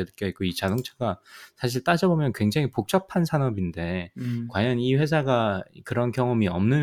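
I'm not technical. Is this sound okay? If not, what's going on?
Yes, nothing stood out as a problem when listening to this recording.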